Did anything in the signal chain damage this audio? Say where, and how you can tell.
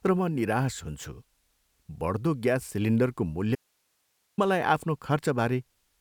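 Yes. An audio dropout to a faint residue cuts the speech at 3.55 s, just after "बढ्दो ग्यास सिलिन्डरको". It lasts 0.83 s, to 4.38 s. Only hiss remains, about 45 dB down. The break is abrupt. A live path points to a likely intermittent analogue connection.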